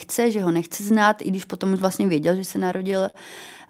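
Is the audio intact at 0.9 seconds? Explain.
Yes, the audio at 0.9 seconds is intact, with no dropout, click, distortion or other fault at that moment.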